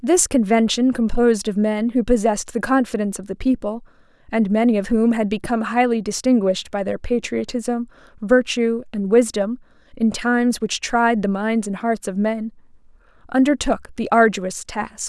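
No technical faults occur in this speech, so there is nothing to describe in time order.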